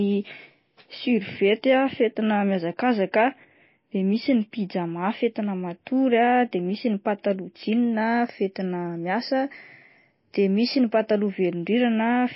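From start to finish the speech carries plainly audible MP3 compression damage, likely from encoding at a very low bitrate, one consistent with something near 24 kbps. Starved of bits, the encoder has removed everything above 5.6 kHz, so sibilants lose their edge and sound dull, while weak spectral detail flickers in and out between frames, giving a watery, swirling texture. A spectrogram would show a hard ceiling at 5.6 kHz and patchy, blocky gaps below it.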